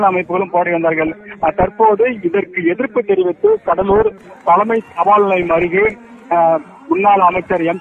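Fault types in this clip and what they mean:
DAB burbling: short blips of noise and sudden sub-band level jumps break over the sound in four bursts, 1.02–1.68 s, 3.57–4.3 s, 5.4–6.22 s and 7.28–7.61 s. Weak reception lets bit errors of about 0.7 to 1 percent slip past error correction and knock individual MP2 sub-bands off level.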